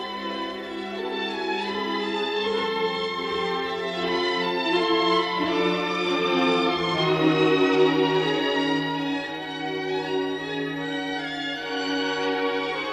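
From start to finish the audio is dull and carries a gurgling, granular roughness, which points to MP2 compression, likely at a low bitrate around 80 kbps. Starved of bits, the encoder shuts off whole upper sub-bands and quantises the rest coarsely. On a spectrogram the top of the range looks ragged, with horizontal bands blinking on and off in blocky patches, while the waveform shows a grainy texture instead of smooth detail.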